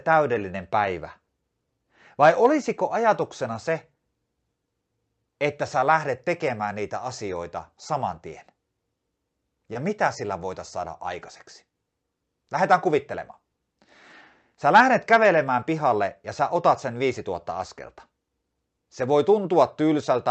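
This speech clip came through a call codec that cuts the top end at around 8 kHz, and at 9.73 to 9.77 s it has a short concealed packet loss: about 20 ms of audio arrived too late, so the receiver extended the preceding sound and blended back, leaving a brief smear just before "mitä sillä voitaisiin saada".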